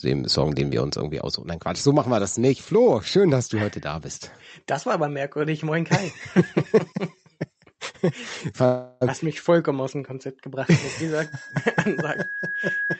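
From 8.65 to 9.03 s the last sound hangs on as a fading buzz for about 0.36 s, then picks up exactly where it stopped. This call audio freeze is likely the jitter buffer running dry while packets were delayed, so a gap was inserted and nothing lost.

At 11.22 s a single 1.7 kHz tone begins to swell, building over roughly a second and a half until it sits at about the level of the sound itself, lasting to the end. This loudspeaker feedback squeal arises when a microphone hears its own loudspeaker and the loop gain at that frequency exceeds one.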